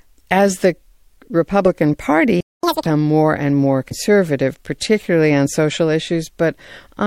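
A speech clip with three technical faults. At 2.40 s there is a playback stall. The sound stops mid-flow and stays silent for about 0.23 s, until 2.63 s. The player likely ran out of data, or its thread was blocked. Then comes catch-up at higher speed, from 2.63 to 2.86 s. The player resamples its backlog at double speed to recover the lost time. Pitch jumps up by roughly ten semitones, then drops back to normal. At 3.88 s there is damaged data in the compressed stream, lasting to 3.93 s. It is heard as a brief glitch. The decoder misreads the corrupted frames and loses sync. It then searches for the next valid frame header and resumes from there.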